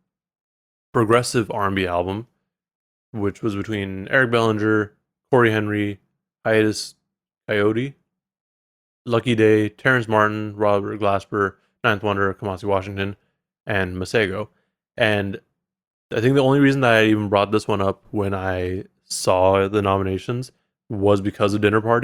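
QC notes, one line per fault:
No faults detected.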